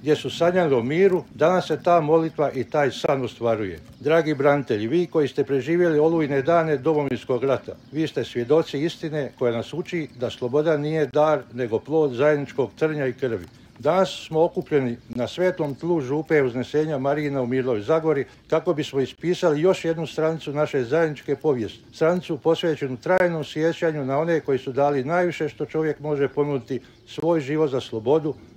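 The audio is interrupted by a gap between chunks, a hole of about 23 ms with hard edges at 3.06, 7.09, 11.11, 15.13, 19.15, 23.18 and 27.20 s, recurring every 4.0 s. Silence is inserted at each join between 4-second chunks, a length that fits padding of 1024 samples at 44.1 kHz. Unlike a dropout, nothing is lost: the sound resumes exactly where it stopped, just slightly late.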